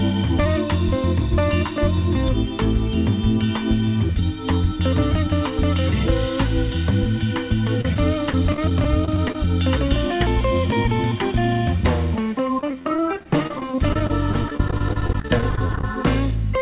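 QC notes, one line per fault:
7.81–9.35 s and 12.59–15.84 s, repeated packet loss (robotic sound): a dozen short holes in the first stretch and roughly fifty in the second, each no longer than about 40 ms. Each one is patched by stretching the previous sound, so the stretches come out choppy. The later run is worse, with about a fifth of it filled in. All of this sits in a call band that stops at 4 kHz.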